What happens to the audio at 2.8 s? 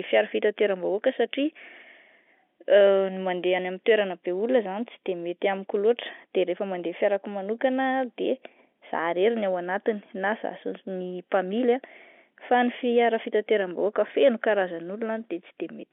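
Nothing goes wrong at 2.8 s: the speech carries on intact through that moment, with only the narrow line band of G.711 telephone coding to be heard.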